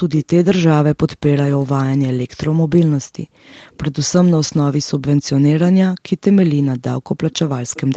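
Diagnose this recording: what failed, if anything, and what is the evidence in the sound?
Faint delayed copies of the speech appear at 0.16–0.26 s, 3.44–3.78 s, 7.32–7.36 s and 7.65–7.81 s, each trailing the original by about 450 to 470 ms. This is an echo leak, likely from a loudspeaker at the far end whose echo canceller let residual pickup through in the call-processing stage. The copies sit roughly 15 to 35 dB below the speech. On a spectrogram they show as weak repeated harmonic traces offset by about half a second, confined below 8 kHz like the rest of the band.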